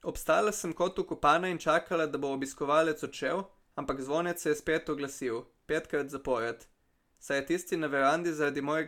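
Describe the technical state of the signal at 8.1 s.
At 8.1 s the speech signal is intact, with no audible technical fault at that moment.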